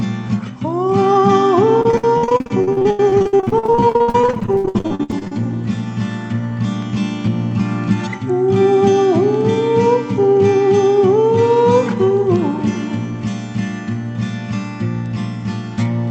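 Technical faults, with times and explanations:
1.81–5.32 s, repeated packet loss (robotic sound): the audio turns choppy, broken by dozens of short dropouts up to 80 ms long. Each lost packet is patched by extending the previous sound, so nearly half this stretch is concealment.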